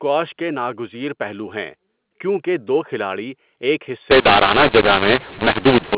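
From 4.11 to 5.95 s, right after "کیونکہ دو کھلاڑی ایک", the speech turns harsh through a mu-law and A-law mix-up: A-law telephone samples are decoded as mu-law, scrambling levels. Unlike simple clipping, quiet gaps fill with noise instead of staying near silence.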